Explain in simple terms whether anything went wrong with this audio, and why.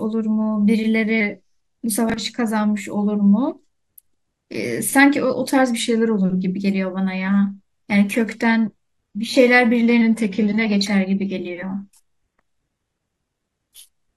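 Three times the speech briefly slows down and drops in pitch: from 1.21 to 1.78 s, 5.79 to 6.55 s, and 10.01 to 10.66 s. Each time it runs about 6% slower and sounds roughly a semitone lower, then snaps back. This is likely a drift correction step, where playback software nudged its speed to keep two clocks in line. Unlike a drop in stream quality, the pitch moves, not just the tone.

At about 2.1 s there is a short garbled moment. That is chunks out of order: a 20 ms piece of audio played one slot late, after the piece meant to follow it. Nothing is missing, which separates it from a dropout. The order is simply scrambled.

From 7.13 s to the end, the sound suddenly gets worse, with more coding artefacts. This is an adaptive stream at a lower bitrate: playback switched to a much lower-quality version, probably because the connection slowed. There is no gap at the switch.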